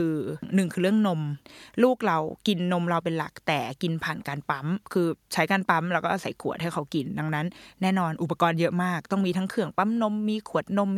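No technical faults can be heard anywhere in the recording; the signal stays continuous and steady throughout.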